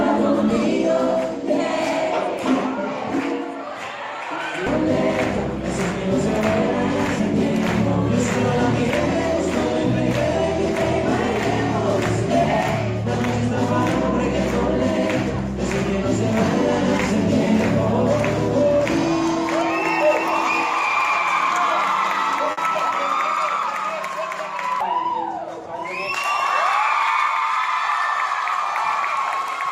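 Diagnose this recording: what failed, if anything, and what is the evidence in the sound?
Network stage: a burst of packet loss at 22.51 to 22.60 s, concealed by 60 ms of fading held sound, then about 60 ms skipped. Spectrogram shows smeared, decaying frames before an abrupt jump.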